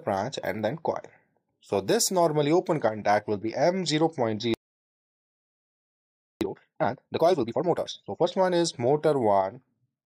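At 4.54 s the sound stops dead in mid-flow. Silence holds for about 1.87 s, until 6.41 s. This is a playback stall. The player likely ran out of buffered data or had its thread blocked. Output then resumes.

From 6.41 s to 8.27 s comes time-compressed catch-up. The player drains its backlog by cutting out small pieces and cross-fading the joins. The audio runs at twice normal speed. Pitch stays normal.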